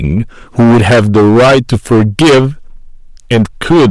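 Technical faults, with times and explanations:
Throughout: hard clipping, speech driven about 15 dB past full scale, roughly a fifth of samples flattened; waveform shows squared-off tops, spectrogram shows harsh harmonics smeared upward.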